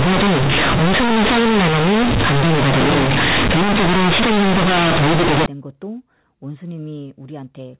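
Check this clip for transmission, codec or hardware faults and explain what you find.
One fault is present. From 0.0 to 5.46 s the speech is very loud and harshly buzzy, with heavy noise in the pauses, so quiet passages blare as loudly as strong ones. This is companded audio read as linear: A-law G.711 bytes are treated as plain 8-bit samples with no expansion. Every sign change then jumps across roughly half the output range, flattening level differences and bending the waveform. After 5.46 s, ordinary 8 kHz A-law telephone audio is heard, limited to below 4 kHz.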